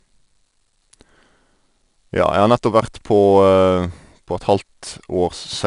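From start to finish the speech has passed through 4-bit ADPCM compression: each sample is coded as a coarse 4-bit step away from a predicted value, with the step size adapting as it goes. The resulting error is plainly audible as gritty, broadband hiss that swells and fades with the speech level. Nothing reaches above 10.6 kHz, which together with the grain points to a bitrate of around 89 kbps.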